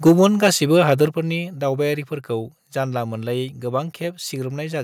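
A speech recording that opens with a harsh, crackling edge from 0.06 to 0.47 s, where the loudest syllables sound flattened and gritty rather than round. That is microphone overload: the input was driven about 4 dB past the converter's ceiling, so the tops of the peaks were sliced off, a small fraction of samples, around 2 percent, pinned at the limit. The likely cause is an input volume set too high for how loudly the person was speaking. Twice, the whole picture, voice and background together, drops abruptly in level: a slight dip of about 2 dB at 0.09 s, right inside the distorted stretch, and a much more obvious fall of about 6 dB at 1.08 s. These are microphone volume step-downs, each an instant single-step cut rather than a gradual fade, likely from the call software reacting to the clipping by lowering the device's input volume.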